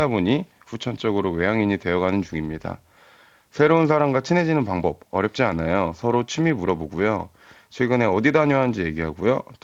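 The speech shows no technical faults; it has passed through the Speex codec with only light coding texture, and the spectrum stops at about 7.7 kHz, which fits a wideband Speex stream at a fairly generous setting.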